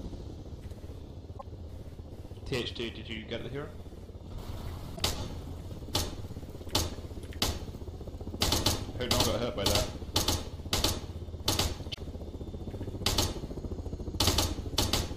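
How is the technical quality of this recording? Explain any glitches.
The recording has three short glitches caused by damaged data in a compressed stream, at 1.35–1.43 s, 4.93–5.01 s and 11.90–11.98 s, each about 80 ms long. At those points the compressed data is corrupt, so the decoder misreads the affected frames and loses sync until it finds the next valid frame header. Each break is heard as a brief squawk or blip. On a spectrogram it shows as a sharp-edged vertical smear of broadband or garbled energy. In the waveform it appears as an abrupt, discontinuous patch.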